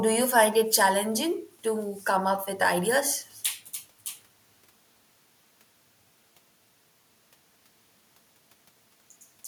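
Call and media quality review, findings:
Nothing stood out on listening; no audible fault found in the speech.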